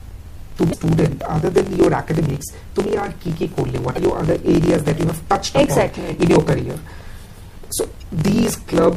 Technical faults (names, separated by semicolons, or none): block size mismatch (truncated); MP3 compression; damaged data in a compressed stream